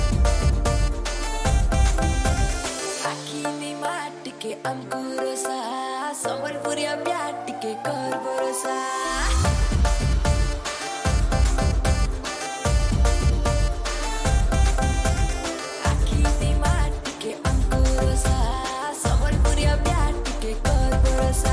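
No technical faults are audible.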